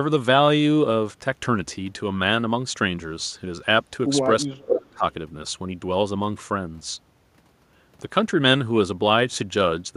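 From 4.43 to 5.04 s the speech dips hard, around 25 dB at worst, most likely speech suppressed in double talk, with an echo canceller ducking both its own talker and the loudspeaker echo while both ends spoke.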